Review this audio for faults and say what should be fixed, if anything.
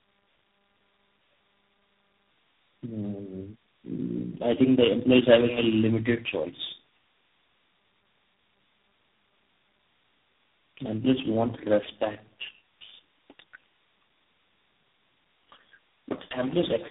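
Tandem speech coding runs through the whole clip: rough, muffled, warbly speech with nothing above 3.8 kHz, which fits four speech coders in a row, each re-coding the previous one's damage. To prevent it, keep the call in one codec end to end, or use transcoder-free operation where networks meet.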